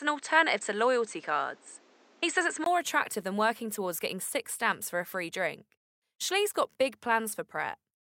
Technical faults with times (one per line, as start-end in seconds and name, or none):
0.00-2.66 input switched to a poorer device